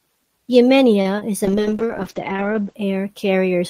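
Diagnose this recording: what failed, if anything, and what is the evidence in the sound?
A late packet caused a short stall at the network and jitter-buffer stage. Between 1.01 and 1.07 s, just before "is a", the packet missed its playout slot and the buffer ran dry. The receiver held the last sound for about 36 ms until the packet arrived, then resumed where it had stopped. No speech is lost, but that moment is drawn out with a faint buzz or dip, and everything after it plays 36 ms later.

A packet was lost and concealed shortly afterwards, also in the network path, at 1.19 to 1.23 s, again just before "is a". About 20 ms of audio never reached the decoder. The decoder patched the gap by extending the preceding sound for roughly 19 ms and cross-fading back into the real signal. The result is a brief smear or wobble, and any short consonant in that instant can drop out.

A call bitrate drop then degraded the codec output from 1.47 to 2.83 s, starting just after "is a". 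The bandwidth estimate collapsed, and the encoder was pushed from 32 kbps down to 9 kbps, where it stayed for about 1.3 s. At that rate the coding becomes coarse, and the audio band shrinks from 20 kHz to 8 kHz. The speech turns muffled and watery until the rate climbs back.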